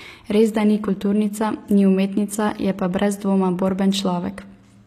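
From start to finish, the speech has an upper band that sounds synthetic, with s sounds coming out gritty and lispy, and nothing above 14.9 kHz. This is likely HE-AAC compression, where only the lower spectrum is coded and the treble is rebuilt by copying lower bands upward under a coarse envelope. The rebuilt harmonics fail to line up across the crossover, and the plainly audible damage fits a low bitrate around 24 kbps.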